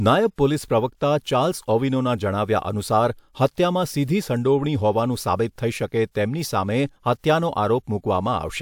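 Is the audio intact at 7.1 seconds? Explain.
Yes, the speech at 7.1 seconds plays through intact, with no audible fault at that moment.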